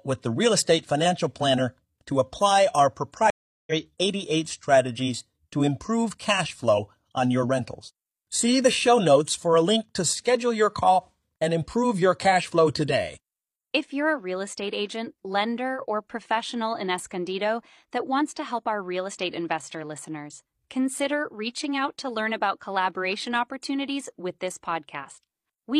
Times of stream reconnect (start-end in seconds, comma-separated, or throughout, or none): 3.30-3.73